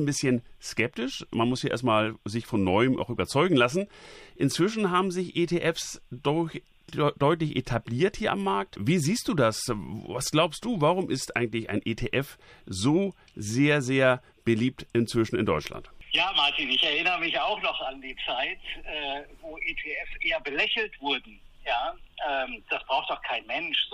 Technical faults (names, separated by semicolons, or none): none